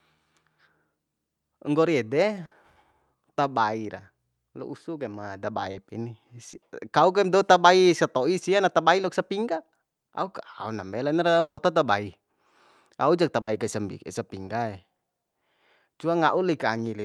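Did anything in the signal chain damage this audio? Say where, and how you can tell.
Yes. Burst of packet loss at 2.45 to 2.53 s and 13.41 to 13.49 s, just before "kai sa": the network stage lost consecutive packets. The receiver stretched the last sound for about 60 ms as a fading buzz or hiss, then the speech resumes with that stretch missing.

Short concealed packet loss at 5.71 to 5.75 s after "usus de ma daba", 6.51 to 6.55 s, 9.01 to 9.05 s between "sato'i sia na tabai" and "sapingga auk aon dambe", and 14.45 to 14.49 s: about 20 ms each was rebuilt from the preceding sound, heard as a brief smear or wobble.

Long network dropout at 11.39 to 11.59 s: the speech gives way to a continuation of the last sound that fades out, followed by near silence before speech returns with the middle gone. This points to packets likely stalling on the network path for about 0.2 s.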